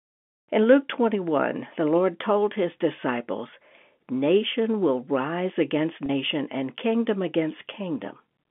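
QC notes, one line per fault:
6.06–6.09 s, packet loss with pitch repetition: a 30 ms gap after "will rise against", fitting one lost packet, gets bridged by repeating the last pitch period, giving a brief held buzz before "and kingdom".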